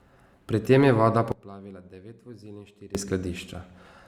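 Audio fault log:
1.32–2.95 s, sudden gain jump: right after "tem je voda", speech and background noise drop together by about 20 dB in one step, returning at 2.95 s, likely a gain change applied without a ramp. A fade would slope; a dropout would go silent.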